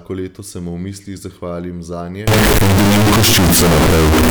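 From 2.27 s to the end, the speech turns into a near-square, high-level blast, likely float read as integer: 32-bit float samples decoded as 32-bit integers, making the background noise as loud as the speech.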